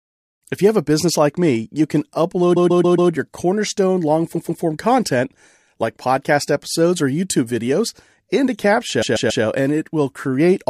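Stutters at 2.56 s after "like me you can", 4.34 s after "your cornerstone long" and 9.01 s after "videos into": a 139 ms block replays four, two and three extra times. These are repeated frames, where a run of compressed frames, which fits about six frames, was duplicated in the stream.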